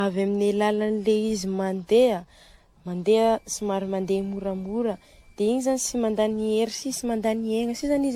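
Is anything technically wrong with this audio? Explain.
Yes. Throughout the clip, the speech has generation loss. The audio sounds swirly and hollow, with smeared consonant attacks and nothing above 18.7 kHz. This is likely the result of repeated lossy encoding, which points to AAC at around 96 kbit/s applied roughly seven times over. Each decode and re-encode quantises the signal again on a shifted frame grid, so noise and spectral gaps build up beyond what a single pass at that bitrate would leave.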